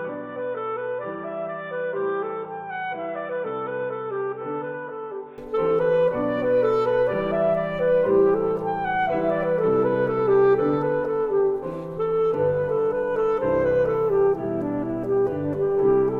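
From 0 to 5.38 s the sound is dull and boxy. Nothing reaches above 3.8 kHz. It is about 10 dB quieter, over a faint noise floor. At 5.38 s it clears, with no gap. The likely cause is an input switched to a poorer device.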